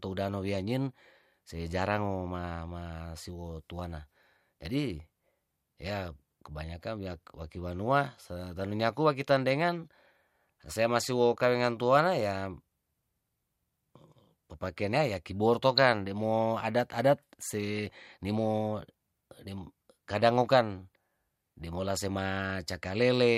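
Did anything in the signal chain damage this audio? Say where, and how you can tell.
Yes. Short bursts of burbling break over the speech at 15.77 s and from 22.17 to 22.21 s. This is DAB burbling at the codec stage. Weak reception let bit errors, around a tenth of a percent, past error correction, so corrupted MP2 samples put short blips of noise into single sub-bands.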